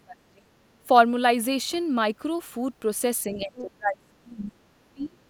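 From 0.0 to 0.48 s, speech is suppressed in double talk. The voice drops sharply, by around 35 dB, likely because the echo canceller mistook both talkers for echo. From 3.31 to 4.53 s it happens again, with drops near 30 dB. Inside that stretch, from 3.4 to 3.62 s, the other side's voice leaks through, faint. This is likely residual loudspeaker echo left in the microphone signal. From 4.93 to 5.2 s, speech is again suppressed in double talk, dipping roughly 30 dB.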